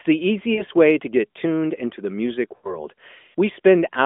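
Speech over a narrowband mobile line, confined to roughly 200 Hz to 3.5 kHz, with two kinds of fault. Lost AMR speech frames occur at 0.54–0.63 s and 2.56–2.78 s. The decoder holds the last pitch and vocal-tract shape while lowering the gain, so the sound smears and sags rather than cutting to silence. The first 40 ms gap fits two lost 20 ms frames and sounds drawn out and fading. The longer 80 ms gap fits four lost frames and fades further before the voice recovers rough. At 0.90 s, just before "to get tuned into", a single sharp click is heard, likely from dropped samples, roughly one sample lost. It leaves a thin vertical line in the spectrum with no smearing, fade or concealment tail, which sets it apart from the frame losses.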